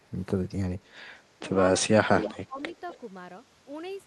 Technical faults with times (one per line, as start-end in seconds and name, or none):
0.00-0.11 speech suppressed in double talk
0.81-4.07 input switched to a poorer device
1.81-2.59 speech suppressed in double talk
2.21-2.32 echo leak
2.62-2.99 echo leak